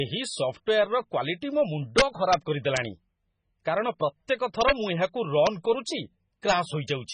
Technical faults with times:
0.00-7.13 MP3 compression
1.98-2.34 integer overflow

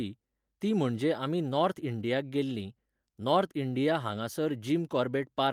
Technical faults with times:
none

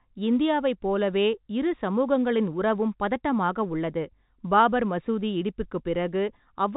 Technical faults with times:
none

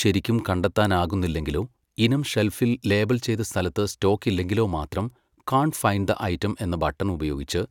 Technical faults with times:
none

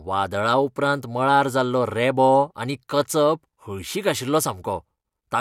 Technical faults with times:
none

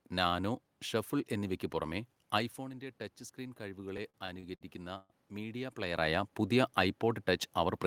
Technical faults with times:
1.81-5.86 automatic gain rising
3.97-5.12 repeated stalls (stutter)

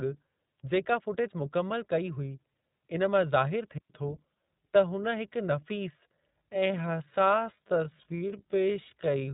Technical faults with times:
0.00-9.33 iLBC codec
3.78-3.90 digital wireless dropout
6.34-9.33 time-stretched section

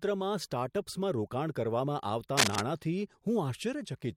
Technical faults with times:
2.37-2.61 cable scratch noise

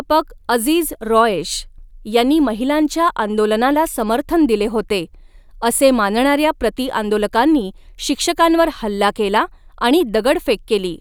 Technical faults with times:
none

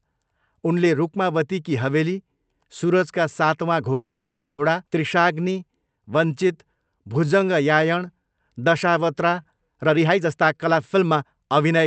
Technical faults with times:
3.93-4.60 call audio freeze
4.86-4.89 skip ahead
5.18-9.43 jitter buffer slow-down
9.76-11.79 jitter buffer speed-up

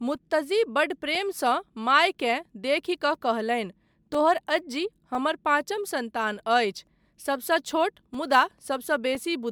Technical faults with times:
0.00-9.52 generation loss
0.15-9.15 periodic USB or driver dropouts

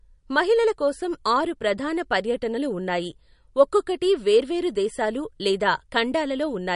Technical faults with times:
0.00-6.76 MP3 compression

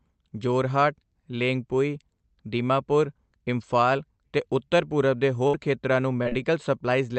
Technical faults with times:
5.47-5.55 burst of packet loss
6.23-6.33 short concealed packet loss

